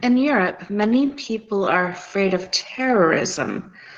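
Throughout the speech, Opus voice compression is plainly audible. The voice is hoarse, slightly robotic and muffled, which points to a low rate around 16 kbps. The band stays full, so it lacks the dull narrowband sound of a telephone codec. The damage comes from coarse excitation coding, with the top end kept by a thin layer above 8 kHz.

From 0.8 s to the end, a time-stretched section slows the pace to about 0.74 times normal. The pitch stays put, unlike a slowed tape, and the speech drags. This is likely software fitting the audio to a longer length.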